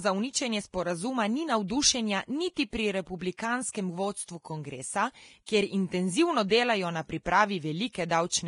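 From start to finish the speech is band-limited, with nothing above 10.6 kHz, and the upper treble sounds hissy and grainy. Consonant attacks are blurred and tones are roughened, the heavy damage of what is likely Vorbis compression at a rate around 31 kbps. Unlike a plain low-pass filter, the remaining highs are replaced by noise-like texture rather than simply dulled.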